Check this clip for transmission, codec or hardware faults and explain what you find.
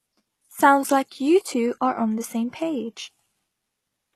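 One codec fault runs through the whole recording, HE-AAC compression being the likely cause. The lower band is coded and the treble rebuilt by spectral band replication, pointing to a very low bitrate near 16 kbps. Nothing survives above 12.3 kHz, and the s sounds come out gritty and metallic throughout.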